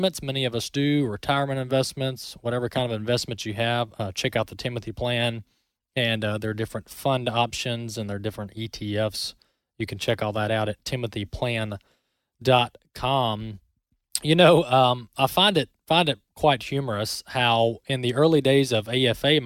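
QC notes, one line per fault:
Nothing stood out on listening to the speech in this clip.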